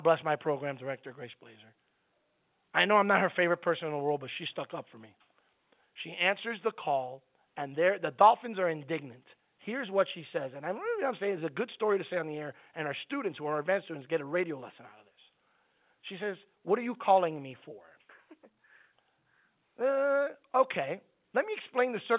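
No technical faults can be heard anywhere in the speech. The G.711 telephone coding shows as a band that stops at 4 kHz, with a faint quantisation hiss riding along with the level, which fits A-law coding at 8,000 samples a second.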